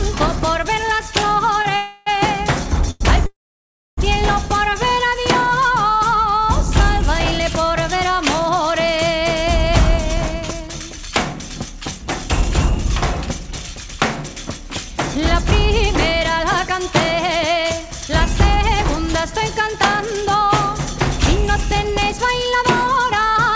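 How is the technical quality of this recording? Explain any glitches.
The recording has clear network-timing glitches: several holds and dropouts early on, then two stretches where the audio runs slightly fast. The band stops at 8 kHz, with coding noise that fits a 64 kbps G.722 call codec.

Short stalls from a late packet, at 1.62–1.66 s and 2.91–3.02 s: the sound hangs on one moment, with a faint buzz or dip, for about 24 ms and then 96 ms. This happens when a packet is late and the jitter buffer empties. The receiver stretches the last bit of audio until the packet shows up, then carries on from the same place, so nothing is lost.

Call audio freezes, at 1.76–2.08 s and 3.26–3.99 s: the first is a 0.3 s stretch where the last sound is smeared out into a fading buzz. In the second, 0.71 s is filled, and for about 0.64 s of it the sound decays into silence before the audio resumes where it left off. 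The likely cause is packets held up in transit, draining the jitter buffer so the receiver had to fill the gap.

Jitter buffer speed-ups, at 10.07–12.90 s and 16.14–23.49 s: the audio runs faster at an unchanged pitch, at 105% and then 104% speed. After the delays, the buffer holds more audio than it wants. To work that backlog off, the receiver repeatedly trims tiny pitch-period-sized slices, cutting roughly 150 ms in the first stretch and about 300 ms in the second.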